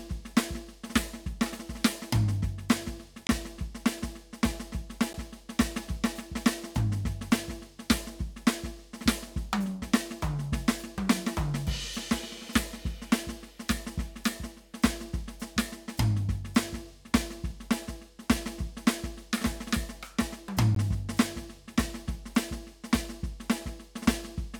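The music drops into a block of digital silence at 3.27–3.29 s (21 ms, fitting a 1024-sample buffer), 5.13 s (11 ms, fitting 512 samples), and 20.75 s (16 ms). Each time this most likely comes from the output buffer going unfilled and being zeroed. The hard edges with no fade set these apart from a softened dropout: the 21 ms and 16 ms gaps land as short holes, while the 11 ms one comes across as a tick or dip.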